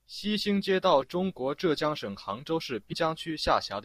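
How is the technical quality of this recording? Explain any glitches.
There's one glitch. At about 2.92 s, right after "江省杭州", some compressed frames are skipped: a handful of frames, around 150 ms of speech, never get played. The decoder jumps ahead by that much, so the speech at that point cuts straight from one moment to a slightly later one.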